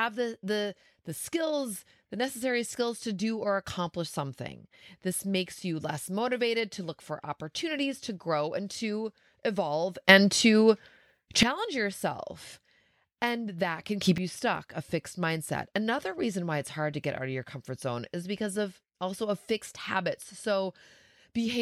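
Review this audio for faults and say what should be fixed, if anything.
A gain stage likely switched level from one sample to the next with no ramp, producing two sudden gain jumps in the speech. After "grow and to evolve", level leaps up about 12 dB from 10.09 to 11.43 s, background noise rising with it; after "that can", it jumps about 10 dB from 14.01 to 14.18 s, dropping back before "you stuck a fixed". Smoothing every gain change over a few milliseconds would prevent this.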